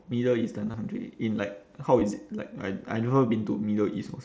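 At 0.71 to 0.74 s, and again briefly at 2.00 s, there's concealed Bluetooth headset packet loss. Packets went missing on the mSBC headset link, and the receiver papered over the gaps by repeating a matching slice of recent waveform. The longer gap fits about 30 ms of loss and leaves a short buzzy patch with a slight warble as the speech resumes, while the 2.00 s one is shorter, about 15 ms.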